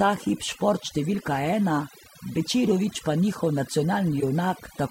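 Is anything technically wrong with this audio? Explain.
Yes. Throughout the speech, the background drops to near silence dotted with twinkling specks. This is overdone noise removal: the reduction was set so strong that bands near its noise estimate were pushed far down, taking quiet parts of the voice with them.

At 1.12 to 1.14 s there is a brief, faint glitch, and at 4.20 to 4.23 s a much louder one. Each is a corrupt frame decoded: flipped bits in a single compressed frame led the decoder to place energy at wrong frequencies for that frame's length.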